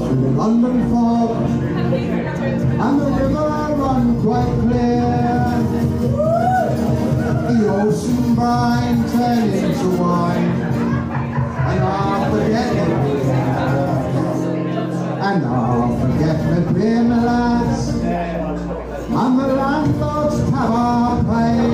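Pre-emphasis left on, from 5.46 to 9.99 s: during this stretch the treble boost applied before recording was never undone by the matching de-emphasis cut. The rise fits the CD 50/15 µs curve, leaving the top end about 8 dB hotter at 10 kHz than at 1 kHz. The sound turns thin and bright, with sibilance pushed forward until the balance drops back at 9.99 s.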